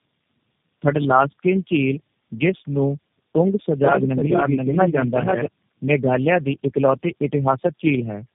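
Throughout, the speech shows tandem speech coding: decoded and re-encoded repeatedly, as if by about four low-rate coders in a row, each compounding the last one's errors. It sounds rough, muffled and warbly. A spectrogram shows smeared, blotchy formants and nothing above 3.4 kHz.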